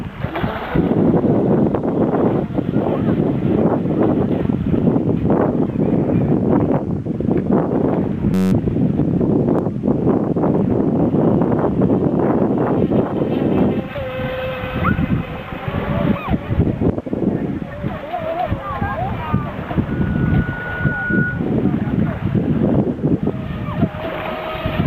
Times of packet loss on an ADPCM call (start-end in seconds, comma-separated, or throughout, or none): none